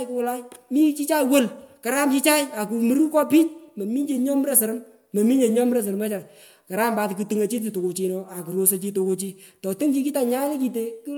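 Throughout this speech clip the sound is swirly and hollow, with smeared consonant attacks, and nothing above 20.1 kHz. This is likely generation loss: repeated MP3 encoding, around four passes at a rate that fits 128 kbit/s, each re-quantising on a shifted frame grid so the artefacts pile up.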